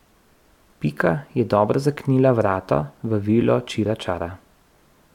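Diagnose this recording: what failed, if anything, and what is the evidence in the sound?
Listening through the speech, nothing stood out that would point to a failure at any stage of the chain.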